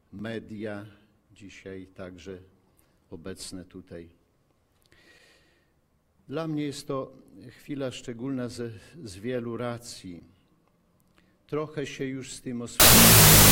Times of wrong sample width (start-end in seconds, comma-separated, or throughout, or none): 12.80-13.51